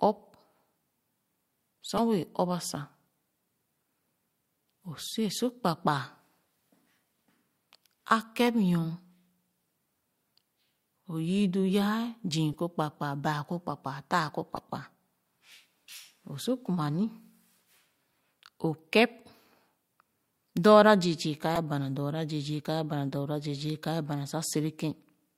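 Corrupt frames decoded at 1.97–1.99, 8.48, 12.52, 14.55–14.59, 16.65, 21.55–21.59 and, after "zii ka ye bana", 24.28–24.31 s: damaged bits misplace energy across one to three frames, giving short chirps or blips, not plain clicks.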